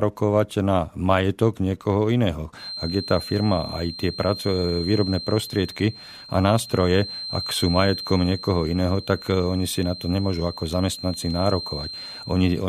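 From 2.54 s to the end, a thin, steady whistle sits behind the speech at 4.2 kHz, well below the voice level and swelling and fading slowly. This is a feedback whistle. Its likely cause is a loudspeaker-to-microphone loop held right at the edge of feedback.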